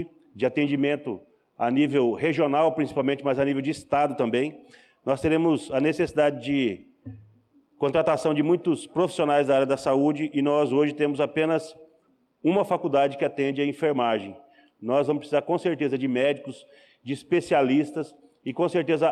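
No technical faults are audible anywhere in the recording.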